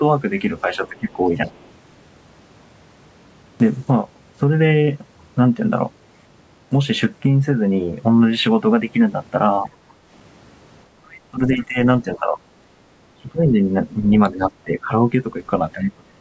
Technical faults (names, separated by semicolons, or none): speech suppressed in double talk; other side's voice leaking through